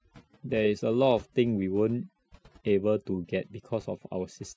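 Throughout the speech, overdone noise removal has gated individual frequency bands that sat near the noise estimate, taking quiet speech detail with them. Gaps fall to near silence with twinkling specks. A spectrogram shows scattered isolated dots and speech harmonics with holes.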